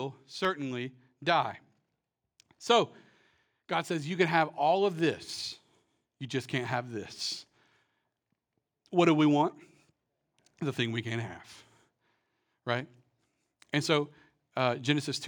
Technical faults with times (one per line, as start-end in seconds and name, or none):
0.45 dropped samples
14.60 dropped samples